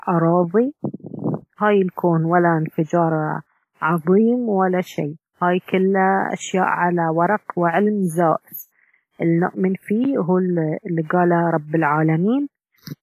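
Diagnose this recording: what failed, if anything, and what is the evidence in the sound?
The damage sits at the codec stage. It runs through the whole speech clip. The sound rings and smears, with a washy texture. A hiss swells and fades with the speech itself. Nothing is heard above about 15.3 kHz. The coding damage is heavy. The cause is likely WMA compression at a low bitrate, which fits a 24 kbps stream. Long transform blocks spread quantisation noise over tens of milliseconds. Weak spectral lines are zeroed outright.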